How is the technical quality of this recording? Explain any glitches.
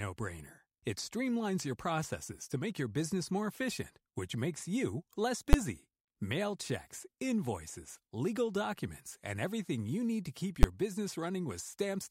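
The speech is marred by two sharp bangs from invalid numbers at full scale. At 5.53 s, after "which makes you less", and at 10.63 s, after "you need to keep", a calculation produced invalid values that were pinned to maximum level for a 10 ms block, so each arrives as one abrupt, very loud click.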